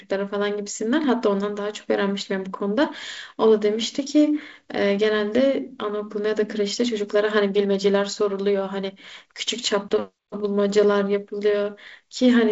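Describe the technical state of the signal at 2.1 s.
At 2.1 s the speech is intact, carried over G.722 wideband telephone coding at 48 kbit/s with nothing above about 7.7 kHz and the light noise that this coding leaves behind.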